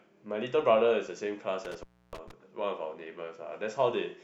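Between 1.65 and 2.31 s the speech is hit by an intermittent contact fault. A loose cable or plug briefly loses its connection. The signal drops out for about 0.3 s within that span. Crackle marks the moment the contact breaks and again when it closes. While the line is open, the speech vanishes and only a faint hiss remains. The crackling edges set it apart from a clean digital dropout.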